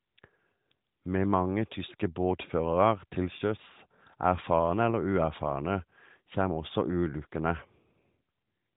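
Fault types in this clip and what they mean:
No faults can be heard in this speech clip. The sound passes through an AMR narrowband mobile codec, which fits a 12.2 kbps mode, so nothing above about 3.8 kHz comes through and there is a light trace of the codec's synthetic edge.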